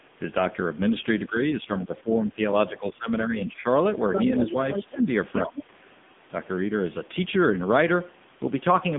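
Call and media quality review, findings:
AMR narrowband mobile codec, whole clip. Speech path coded at a low AMR-NB rate, heavy damage consistent with roughly the 6.7 kbps mode. Line band about 150 Hz to 3.6 kHz, nothing above 3.7 kHz. Result: muffled, phone-like speech, no sibilant air. Too few bits for the vocal-tract model and its sparse pulse excitation, so the voice comes out buzzy and synthetic throughout.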